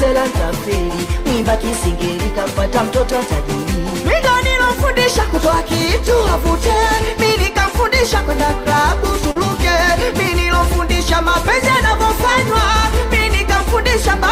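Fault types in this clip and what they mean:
Short concealed packet loss: About 40 ms of audio failed to arrive in time near 9.31 to 9.37 s, and the receiver filled roughly 39 ms by extending the preceding sound before blending back, heard as a brief smear or wobble in the signal.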